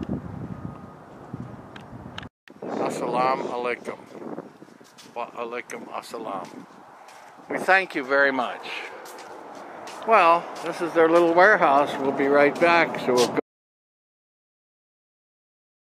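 At 13.4 s the audio cuts off abruptly in mid-flow and stays at silence through the end, about 2.4 s, with no room tone underneath. This audio dropout to silence is likely a lost input, while the recorder kept writing silence.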